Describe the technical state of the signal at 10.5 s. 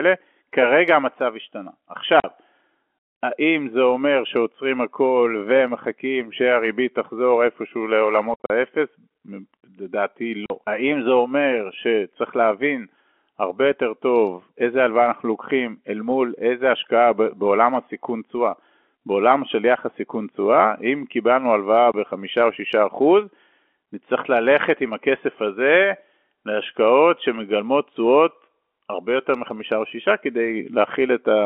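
At 10.5 s the speech ends a gap of packet loss filled with silence, running from 10.46 s. About 40 ms vanished, likely two 20 ms packets, leaving a hard-edged hole.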